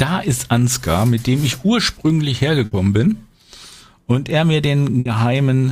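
Burst of packet loss at 2.65 to 2.74 s and again at 4.99 to 5.08 s: each time about 60 ms of audio went missing, and the receiver filled the gap by carrying the last sound forward while fading it, before jumping ahead.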